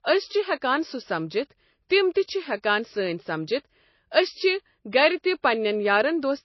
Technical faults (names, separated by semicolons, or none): MP3 compression; pre-echo